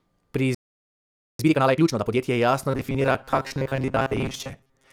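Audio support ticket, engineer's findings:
Playback stall, 0.55 to 1.39 s. Speech cuts out mid-flow, dead silence for about 847 ms, then resumes. Likely cause: output buffer starved of data or playback thread blocked until recovery. Component: player buffering or scheduling path.

Time-compressed catch-up, 1.39 to 2.23 s, directly after the stall. Speech runs at 2x rate, pitch held normal. Player draining its backlog by cutting out small segments and cross-fading the remainder. Component: jitter or latency control in the player.

Robotic sound from repeated short buffers, 2.71 s to end of clip. Speech becomes a rigid metallic buzz at 134 Hz, still roughly tracking the syllables. Period of about 7.5 ms points to a buffer of that length being replayed. Roughly half the material repeated, real audio skipped. Likely cause: input arriving too seldom, with the concealment repeating its last buffer.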